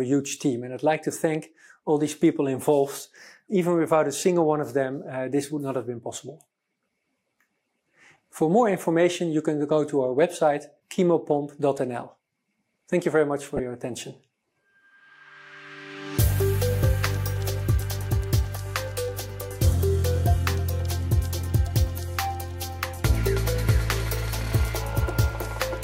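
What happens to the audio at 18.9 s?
Nothing goes wrong at 18.9 s; the audio passes through that moment intact, with no dropout, click or other fault.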